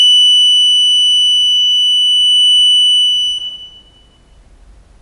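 From start to finish the music has a watery, swirling quality, with the treble stopping dead near 10.6 kHz so nothing shimmers above it. This is most likely MP3 compression at a bitrate low enough to starve the encoder, which fits something around 48 kbps. Short of bits, it cuts the top band outright and drops quieter frequency lines that come and go frame by frame, leaving plainly audible smearing and flicker across the whole clip.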